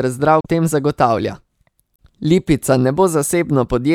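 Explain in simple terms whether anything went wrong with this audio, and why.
Two short glitches break into the speech, at 0.41 to 0.46 s, just before "tem zagotavlja", and again at 1.96 to 2.01 s. Each is a quick glitch lasting about 50 ms, and both come from damaged data in a compressed stream. Part of the compressed file was corrupted, so the decoder misread that chunk, lost its place, and had to hunt for the next clean frame. That stumble is the blip you hear.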